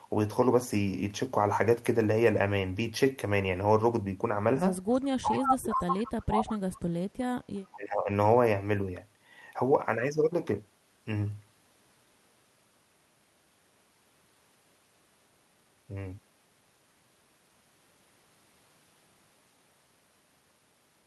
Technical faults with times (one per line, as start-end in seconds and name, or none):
4.93-5.06 echo leak
5.21-7.38 speech suppressed in double talk
5.33-6.12 echo leak
7.75-8.09 speech suppressed in double talk